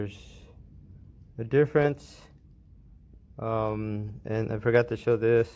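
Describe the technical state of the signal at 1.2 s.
Nothing is wrong with the signal at 1.2 s; the audio is intact there, with no dropout, clipping or other audible fault at that point.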